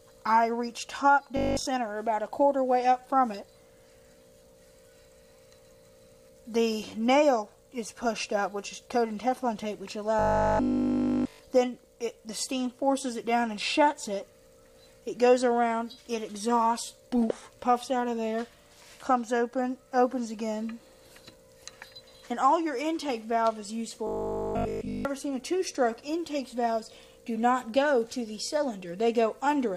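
At 1.37 to 1.67 s, 10.19 to 11.39 s and 24.07 to 25.05 s the audio goes robotic, a rigid 50 Hz metallic buzz. It's likely repeated short buffers: nearly everything there is a 20 ms chunk looped while fresh audio is skipped.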